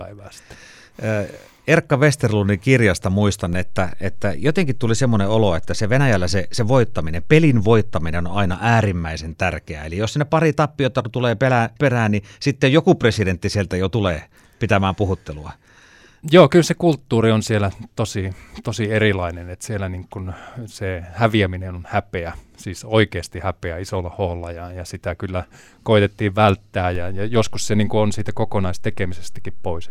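A speech recording with two DC steps, where the zero line of the waveform jumps abruptly by about -22 dBFS and the speech carries on over it unchanged. The first offset arrives at 3.53 s and releases at 8.53 s, giving a low thump at each edge. The second begins at 26.95 s and holds through to the end, so only its onset thumps. Such jumps point to a converter recalibrating or an offset-carrying input being switched in.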